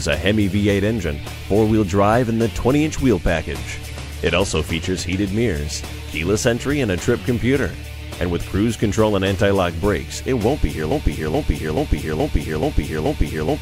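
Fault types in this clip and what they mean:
Bluetooth SBC bit pool drop: The wireless link came under strain and the encoder cut its bit pool, consistent with a fall from 31 to about 15, near 105 kbps. From 3.16 to 4.60 s the treble dulls and gritty noise rises.
Broken-record loop: The stream likely stalled and the player kept resending the last fragment it held. From 10.91 s to the end, a 0.43 s piece repeats exactly, back to back, six times, and the sound that should have followed is lost.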